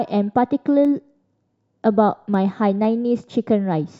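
From 0.35 s to 3.85 s, periodic USB or driver dropouts recur every 0.5 s. Each time, something stalls the USB transfer or audio driver and a tiny fraction of a millisecond of speech is skipped, leaving a small regular tick wherever speech is present.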